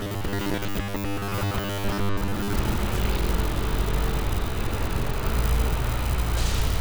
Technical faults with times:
0.01-2.53 robotic sound from repeated short buffers

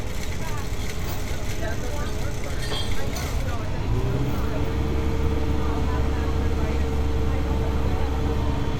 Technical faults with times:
none

